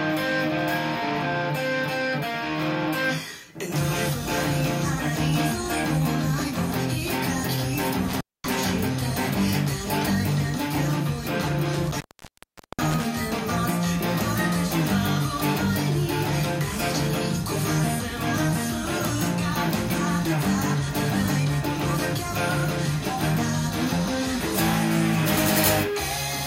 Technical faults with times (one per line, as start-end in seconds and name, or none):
8.09-8.56 intermittent contact
11.73-13.06 intermittent contact